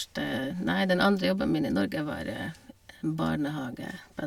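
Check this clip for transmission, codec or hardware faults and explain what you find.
Nothing here points to a transmission, codec or hardware problem; the speech carries on without any dropouts, glitches or distortion worth flagging.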